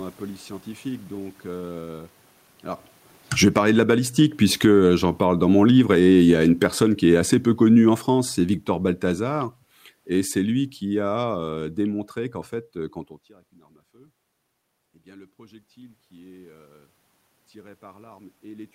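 A speech clip in which the automatic gain control keeps pumping the level up and down. Automatic gain falling happens three times. Just after "euh alors", from 2.92 to 3.82 s, the level drops by about 16 dB. It drops again by about 6 dB from 4.47 to 6.04 s, and by about 10 dB from 6.63 to 12.14 s, ending just before "qu'en fait euh quand". Each time the gain stage judged the input too loud, or its background noise too strong, and eased its gain down, so the room noise sinks in step with the voice. Overlapping these drops, automatic gain rising runs from 3.75 to 7.21 s, lifting voice and background together by about 7 dB over more than three seconds because the control judged the input too quiet. The shared movement of the background is what tells these gain changes apart from the talker shifting position around 2.5 s and 13 s. There only the voice level changes at the microphone, while the room noise holds steady.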